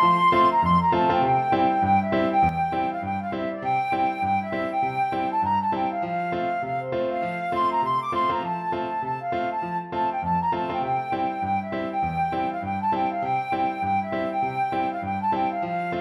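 At 2.49 s one stereo channel drops out, most likely through a lost connection or a failed path feeding that side, and stays gone to the end. Material common to both sides falls abruptly by about 6 dB, while anything present only in the lost channel vanishes entirely.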